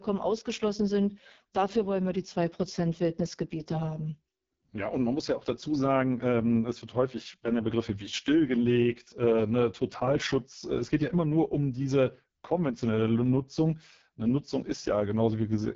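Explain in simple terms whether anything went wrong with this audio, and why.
The speech sounds rough and raspy from start to finish because of the AMR wideband (HD Voice) codec, run at one of its lowest quality settings. It rebuilds the voice from a simplified model, and nothing above about 7.4 kHz survives, so the sound is dull and gritty throughout.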